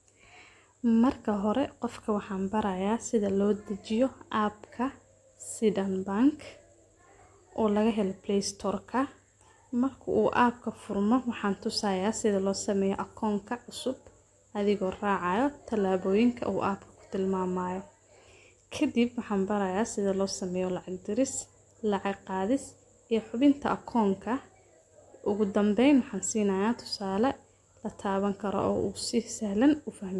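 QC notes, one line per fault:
No fault was found in this speech clip. Nothing calls for a timed entry.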